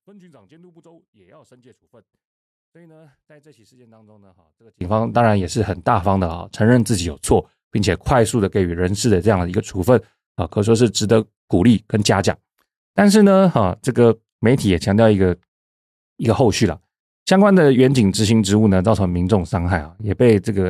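A speech recording whose opening stretch, from 0.0 to 4.81 s, collapses when heard in mono: the level falls by about 35 dB, leaving only a faint residue where the centred voice and low end should be. The likely cause is one channel inverted, so that the material common to left and right cancels on summing and only the small difference between the two channels survives until 4.81 s.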